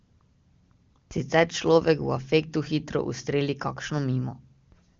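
No faults in this speech; it has passed through the AMR wideband (HD Voice) codec at what sounds like its top rate, with the band ending near 7.3 kHz and at most faint coding damage.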